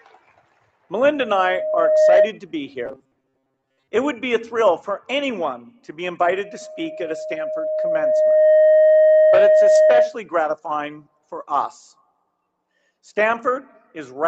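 From 0.01 to 0.63 s, the noise suppressor cut the sound, pulling it down by up to about 12 dB for roughly 400 ms. The waveform shows a shrunken envelope and tails that end abruptly.

From 1.00 to 2.31 s, a loudspeaker feedback squeal appears. The microphone-to-speaker loop runs away at 622 Hz and swells over about a second to roughly 10 dB above the sound. On a spectrogram it is a single bright horizontal line.

From 2.86 to 3.88 s, the sound turns into a rigid metallic buzz at 133 Hz. This robotic sound likely comes from repeated short buffers: most of the audio is replaced by loops that fit a buffer of about 7.5 ms. The spectrogram shows evenly spaced harmonic stripes.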